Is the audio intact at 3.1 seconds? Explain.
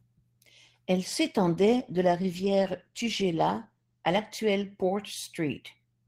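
No. At 3.1 seconds the speech sounds rough and muffled, with the crisp high end gone and a coarse, watery texture. This is a call bitrate drop running from 1.26 s to 5.39 s. The call's bandwidth estimate fell, so the Opus encoder coded with far fewer bits, quantising more coarsely and trimming high frequencies. The degradation fits a fall from about 32 kbps to 15 kbps, holding at its worst for about 2.3 s.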